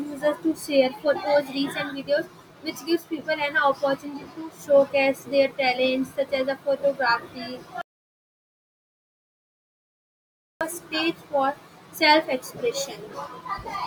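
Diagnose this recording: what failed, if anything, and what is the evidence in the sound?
Audio dropout to silence from 7.82 s to 10.61 s: the speech cuts off mid-flow and about 2.8 s of silence follows, with no room tone, before it resumes. Likely an input or link failure, with the recorder continuing to write silence.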